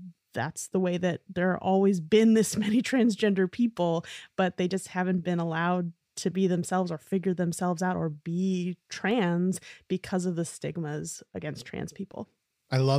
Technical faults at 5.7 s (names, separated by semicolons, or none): none